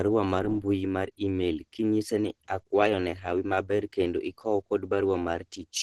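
Throughout the speech, the sound is muffled and hoarse, with nothing above 12.2 kHz and a heavy grainy roughness instead of the swirling, hollow gaps of MP3. This is likely Opus compression in its hybrid speech mode, which fits a bitrate near 12 kbps.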